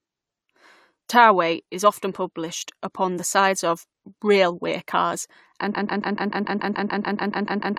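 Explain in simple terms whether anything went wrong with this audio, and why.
A broken-record loop starts at 5.74 s and runs to the end: one 0.14 s snippet repeats 14 times, likely from a stalled player resending it.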